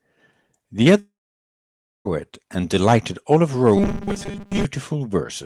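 A speech clip with two faults. From 0.99 to 2.07 s there is a long network dropout. The sound smears into a short fading buzz, then goes silent for about 0.94 s. About 1.06 s of speech is lost. The likely cause is a long gap in arriving packets. From 3.77 to 4.65 s the speech turns to a rigid metallic buzz at 200 Hz. This is robotic sound from repeated short buffers. A 200 Hz pitch fits a 5 ms chunk being replayed. Most of that stretch is repeats, not real audio, likely because new data arrived too seldom.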